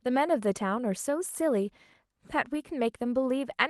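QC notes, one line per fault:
No faults to note for this speech clip, which came through an Opus call path at 32 kbps with its usual coding noise and top end limited to around 12 kHz.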